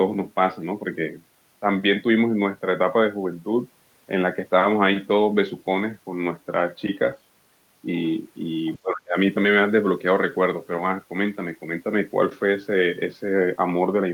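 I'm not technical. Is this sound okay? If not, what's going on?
No. Two related problems happen close together. From 8.74 to 8.78 seconds, a faint scrap of a second voice slips in. This is the other side's voice leaking through. The caller's device likely played the other person on a loudspeaker, and its echo canceller missed a bit.

Right after, from 8.78 to 9.16 seconds, the main voice suddenly drops. It gets much quieter, almost disappearing, for about 0.4 seconds. This is speech suppressed in double talk. Both people were likely talking at once, and the echo canceller turned everything down.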